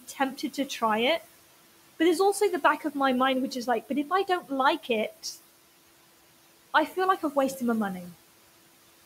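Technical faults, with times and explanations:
Throughout: noise suppressor artifacts. The suppressor pulls the steady room noise down by about 18 dB, frame by frame, so the background dips between phrases and returns under the speech.
0.08–0.20 s, 0.37–0.82 s, 4.07–4.51 s: speech cut by the noise suppressor. The suppressor mistakes low-level speech for noise and turns it down with the background, by about 11, 12 and 14 dB at the deepest. Roughly 0.10 to 0.15 s in each span sounds swallowed or faint.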